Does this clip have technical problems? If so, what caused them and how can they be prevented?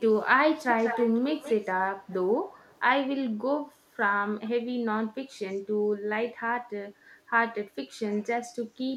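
Yes. An echo leak appears six times: 0.16–0.23 s, 0.62–1.73 s, 2.03–2.15 s, 2.51–2.8 s, 4.45–4.5 s and 5.53–5.59 s. Each is a copy of the speech trailing it by 190 ms. The long stretch from 0.62 s is fairly strong, about 10 dB below the speech, and the others are faint scraps. The likely cause is a loudspeaker at the far end whose echo canceller let part of its microphone pickup through and sent it back. On a spectrogram, fainter duplicates of the speech patterns sit 190 ms to the right of the originals. On the waveform they appear as small bumps just after louder passages. A headset at the far end, or a stronger echo canceller tuned to that delay, would prevent it.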